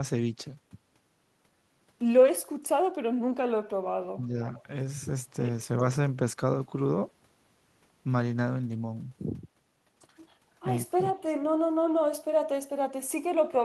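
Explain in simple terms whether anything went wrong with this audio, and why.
Speech suppressed in double talk shows up at 4.14 to 4.19 s, where the speech briefly drops to a much quieter level for about 50 ms. This is likely because both ends of the call were talking at once. The echo canceller could not tell the local talker apart from the sound of the other side coming out of the loudspeaker, so it turned everything down for that moment.

Echo leak follows at 4.22 to 4.26 s, again at 4.58 to 4.63 s, and once more at 11.16 to 11.2 s. Each time a faint, short scrap of the speech returns about 434 ms after the original. This likely happens because one side was on a loudspeaker, and its echo canceller did not fully remove what its microphone picked up. The leftover bit was sent back down the line as a delayed copy.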